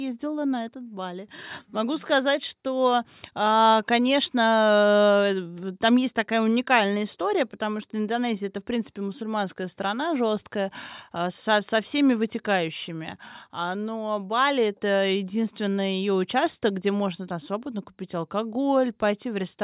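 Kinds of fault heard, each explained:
Nothing stood out on listening to this speech recording.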